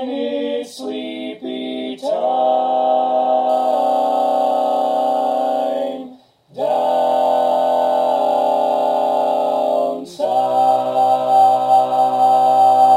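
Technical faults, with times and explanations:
3.49 to 12.97 s, crude rate conversion: samples are dropped at a fixed rhythm with no filtering, fitting a 48 kHz to 44.1 kHz change, which leaves an inharmonic, gritty fizz roughly 30 dB down that tracks loud, high passages, unlike steady hiss.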